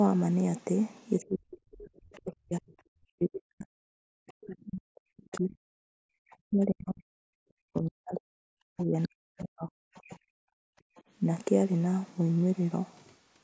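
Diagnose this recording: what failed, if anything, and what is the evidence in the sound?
Speech suppressed in double talk, at the call-processing stage: from 1.18 to 10.72 s the voice repeatedly dips, by up to roughly 40 dB, for about seven seconds in total, likely because the echo canceller misjudged double talk.

Other side's voice leaking through, also in call processing: a second voice appears at 2.15–2.2 s, 5.35–6.37 s and 9.98–11.01 s, about 30, 20 and 35 dB below the speech, likely residual loudspeaker echo.

Background gated by the echo canceller: room sound drops about 40 dB at 3.97–4.02 s and 5.9–6.16 s, as the canceller clamps the microphone during loudspeaker playback.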